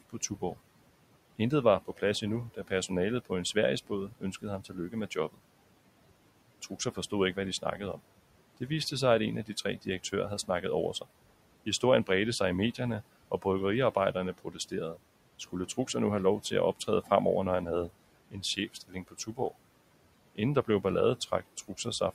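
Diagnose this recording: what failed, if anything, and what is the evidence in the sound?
The fault sits in call processing, where noise suppressor artifacts run through the whole speech clip. The room noise, about 18 dB below the speech, is pulled down by about 18 dB in the gaps and comes back up under each phrase, so the background pumps in step with the talker. The suppressor estimates the steady noise and attenuates each band frame by frame.

The same stage also causes speech cut by the noise suppressor, in three stretches: 0.1 to 0.57 s, 1.88 to 5.41 s, and 6.7 to 21.86 s. Within them, soft consonants and word tails drop out by as much as about 16, 19 and 18 dB respectively. The swallowed parts add up to about a tenth of a second, roughly 0.7 s, and around 2 s. The suppressor is classing low-level speech energy as noise and gating it down with the background.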